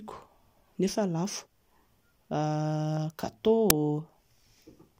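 At 3.70 s an uninitialised buffer breaks in: a block reached the output before audio was written to it, so leftover memory played as a harsh digital crack, which fits a 256-sample block. The waveform shows a dense, tall slab, and the spectrogram a thin full-band stripe.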